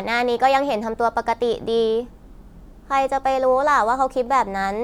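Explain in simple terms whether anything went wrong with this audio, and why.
Nothing went wrong here, as far as the ear can tell: the speech comes through without any dropouts, glitches or other technical problems anywhere along the way.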